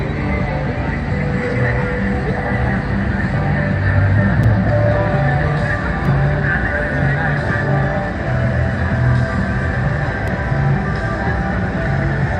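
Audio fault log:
4.44 s, 6.05 s, 10.28 s: block of digital silence. The sound drops straight to silence and returns with no fade. The first gap lasts about 5.3 ms, which fits a 256-sample block, and is heard as a tick or dip. The others last about 1.3 ms and sound like ticks. The output buffer likely was not filled in time.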